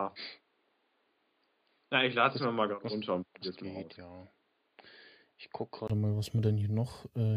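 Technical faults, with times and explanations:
0.0–5.9 s, input switched to a poorer device: the recording likely started on a lesser microphone or headset profile, then changed back. Until then speech sounds dull and boxy, with nothing above 4.8 kHz, about 5 dB quieter with faint extra background noise, clearing after a 20 ms gap at 5.90 s.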